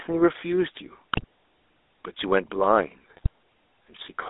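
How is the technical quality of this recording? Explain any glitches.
The recording has been through an old mobile phone link, with codec coloration throughout and two short bursts of transmission damage.

Throughout, the GSM full-rate codec is plainly audible. The band runs from about 300 Hz to 3.7 kHz, and the speech carries a buzzy, gravelly grain. The codec rebuilds the voice from a vocal-tract filter fed by sparse, regularly spaced pulses, which fits a 13 kbps full-rate stream. A generic low-bitrate codec tends to sound watery or swirly. This one sounds rough and reedy instead.

At 1.13 to 1.24 s and again at 3.17 to 3.27 s, there are GSM bit errors. Corrupted bits reach the decoder, so the filter, pitch or gain values for a few consecutive frames come out wrong. Each burst lasts about a tenth of a second, and the sound there turns into squawks, pops and gargling, with sudden jumps in spectrum and level. 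Packet-loss concealment would repeat or fade the sound, and a dropout would go silent. These bursts are malformed and noisy instead.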